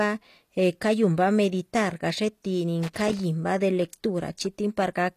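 From the start, the treble sounds rebuilt rather than recorded, and nothing sounds above 14.9 kHz. The codec damage is plainly audible. The likely cause is HE-AAC compression, with upper bands copied up from lower ones, which fits a bitrate around 24 kbps.

From 2.83 to 3.20 s there is loose connector crackle. It is an irregular burst of crackle or scratching. A worn or dirty contact is making and breaking as it moves, chopping the signal on and off.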